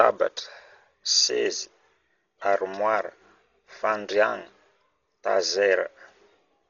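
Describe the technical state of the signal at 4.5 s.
Dolby Digital compression damage is present at 4.5 s and throughout the speech clip: nothing is heard above 7 kHz, so it sounds dull, with rough, fluttering noise around tones. This is likely a starved AC-3 encode, consistent with about 32 kbps, where many frequency lines lose mantissa bits and the decoder fills them with dither noise.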